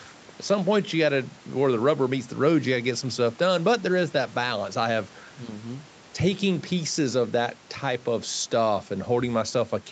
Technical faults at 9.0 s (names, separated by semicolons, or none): none